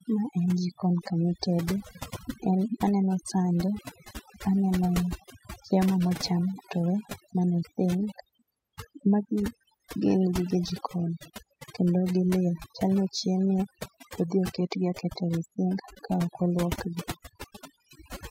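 Speech with overdone noise removal throughout: background drops and breaks up into twinkling specks, and a spectrogram shows scattered isolated blips between gaps.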